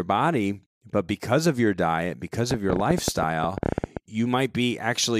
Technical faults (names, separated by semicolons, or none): train of clicks